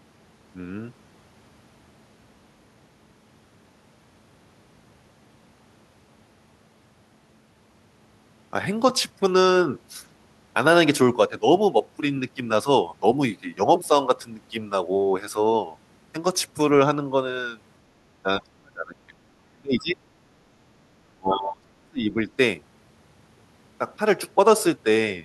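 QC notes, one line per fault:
18.23 to 22.15 s, speech suppressed in double talk: the speech is pushed down in three stretches, 18.23 to 19.19 s, 19.5 to 20.02 s and 21.16 to 22.15 s. The level falls by about 30 dB in the first two and about 35 dB in the last, so the speech drops out in pieces. The likely cause is an echo canceller that could not separate this talker from loudspeaker echo while both sides spoke, and so attenuated both.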